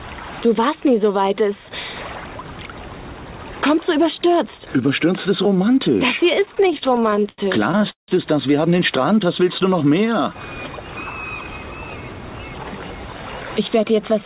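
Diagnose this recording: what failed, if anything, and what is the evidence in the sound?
Repeated stalls (stutter) from 6.40 to 8.10 s, at the network and jitter-buffer stage: late packets drained the buffer 21 times, and the receiver stretched the last sound to fill each gap, up to 171 ms, about 28% of that span. Nothing is lost, but the sound drags.

Jitter buffer speed-up from 13.58 to 14.23 s: with excess audio queued, the receiver cut short pitch-period pieces, around 50 ms in all, so the sound runs at 107% speed with unchanged pitch. Throughout, nothing reaches above 4 kHz, consistent with a narrowband G.711 call path.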